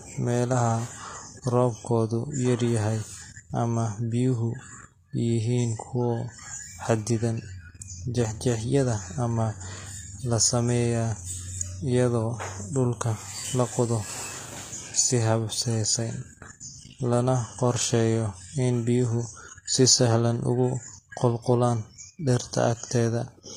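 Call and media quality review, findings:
Sibilants gritty and lispy, treble bright but synthetic, plainly audible throughout the speech, nothing above 15.5 kHz. Likely HE-AAC compression, fitting a low bitrate around 24 kbps. Treble rebuilt by spectral band replication from copied lower bands, so harmonics misalign above the crossover.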